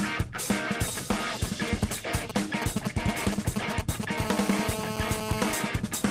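GSM signalling bursts break in from 0.88 to 4.05 s: a galloping dit-dit-dit of brief 217 Hz buzzes, only slightly below the signal, from a nearby 2G phone whose intermittent radio bursts the audio circuit rectifies. A waveform shows clustered spike trains, and a spectrogram shows short vertical stacks of harmonics. GSM phone buzz follows from 4.18 to 5.53 s, a steady, raspy 217 Hz tone about 7 dB below the signal, from a phone in a call transmitting in bursts 217 times a second. A spectrogram shows evenly spaced horizontal harmonic lines.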